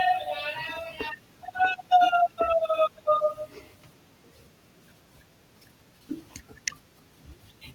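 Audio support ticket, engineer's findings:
Nothing to flag here; I went over the whole speech recording and couldn't hear a single fault worth writing up.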